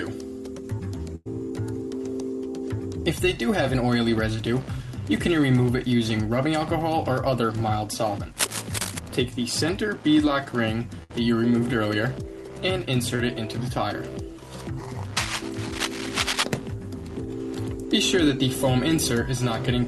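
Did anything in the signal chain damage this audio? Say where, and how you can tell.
Yes, in three places.

Network stage, burst of packet loss: at 1.15 to 1.27 s and again at 11.03 to 11.11 s the sound stretches into a held, fading continuation, about 100 ms and 60 ms long. The receiver extrapolated the last audio across the gap, then resumed further on with that stretch missing.

Analogue wiring, cable scratch noise: from 8.31 to 8.99 s, at about 5 dB below the signal, and from 15.17 to 16.44 s, at about the signal's own level, dense, irregular rustling sits over the sound. Rapidly changing contact resistance, likely from a worn cable or connector being moved, causes this.

Network stage, short concealed packet loss: at 13.15 to 13.21 s there is a brief smear where roughly 40 ms of audio never arrived. The decoder filled about 31 ms by continuing the preceding sound, then crossfaded back. 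The Opus call path, with its band limit near 12 kHz, carried all of this.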